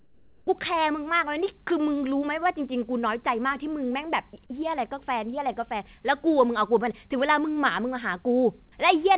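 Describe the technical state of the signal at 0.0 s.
Right at the start, from 0.0 to 0.47 s, the background sounds like comfort noise in place of the real room tone. It's a flat, featureless hiss about 5 dB quieter than what follows, sitting around 36 dB below the loud parts. The likely cause is the sender's voice detector pausing transmission during silence, leaving the receiver to fill the gap with synthetic noise. Like the rest of the clip, it has nothing above 4 kHz, which fits a narrowband G.711 call.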